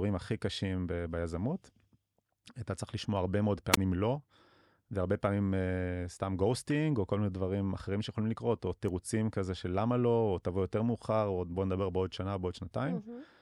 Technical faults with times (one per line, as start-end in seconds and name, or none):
3.72-3.77 wireless microphone squelch dropout